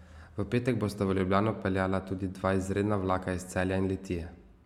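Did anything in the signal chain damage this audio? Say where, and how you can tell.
No, nothing along the chain left an audible mark on this speech recording; every stage from capture to playback passes it without damage I can hear.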